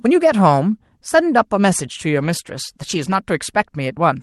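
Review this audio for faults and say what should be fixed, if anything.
A call bitrate drop runs from 2.17 s to 3.25 s. The call's bandwidth estimate fell and the Opus encoder was told to spend far fewer bits. The change in texture fits a halving from 32 kbps to 16 kbps, held at its lowest for about a second. With fewer bits per frame the codec quantises the speech more coarsely, so that stretch sounds rougher and less clean than the surrounding audio, which comes through the normal call path with its usual 12 kHz bandwidth. To prevent it, give the call enough network headroom and set a higher minimum bitrate so the encoder isn't pushed this low.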